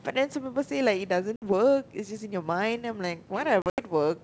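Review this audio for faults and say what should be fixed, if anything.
Two hard-edged holes break the speech, and each time the sound comes back slightly distorted, with a roughness that settles within some tens of milliseconds. The first gap runs from 1.36 to 1.43 s and loses about 60 ms, a few packets' worth. The second is scattered over about 160 ms from 3.62 to 3.80 s, with about 120 ms missing in total and the longest run 80 ms, roughly seven packets. This is packet loss on an ADPCM call, here the G.722 wideband link. The missing audio was filled with silence, and the receiving decoder's adaptive predictor and step size drifted away from the sender's, so the first moments after each hole are decoded against the wrong reference until the two sides reconverge. Adding jitter buffering, packet-loss concealment and a decoder state reset or resync after each gap would prevent it.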